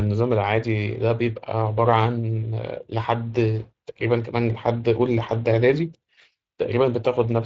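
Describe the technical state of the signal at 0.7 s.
Speex codec coding is present at 0.7 s, as it is across the whole clip. This CELP speech codec spends few bits on the excitation signal, so the speech comes through noisy and hoarse, with plainly audible damage that fits a mid-rate setting of roughly 20 kbps.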